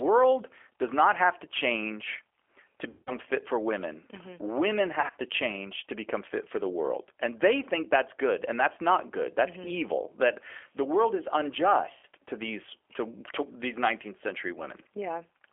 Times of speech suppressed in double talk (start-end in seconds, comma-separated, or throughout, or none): none